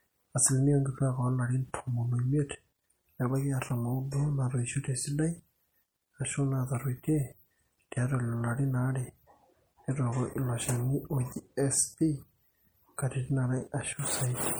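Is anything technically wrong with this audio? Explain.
Yes. Throughout the speech there is clearly audible MP3 compression, likely from an encoder short of bits, as the damage fits a bitrate around 64 kbps. Faint frequency detail flickers between frames, giving a watery, swirly texture, chirpy s sounds and softened consonant attacks.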